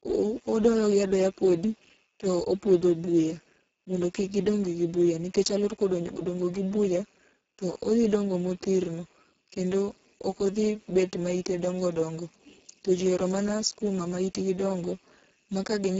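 From start to finish, this speech clip carries heavy Speex codec damage. The sound points to a very low bitrate, around 6 kbps. At that rate the CELP coder has almost no bits for the excitation signal. So the speech comes out hoarse and noisy. Nothing is present above about 7.7 kHz. Energy above 4 kHz sounds like a thin, shaped hiss rather than real detail.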